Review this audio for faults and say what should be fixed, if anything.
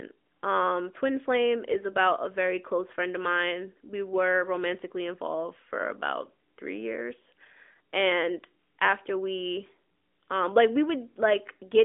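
No faults found; nothing to fix.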